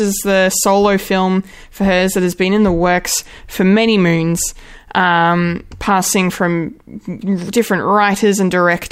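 Speech recording; no technical faults heard anywhere in it.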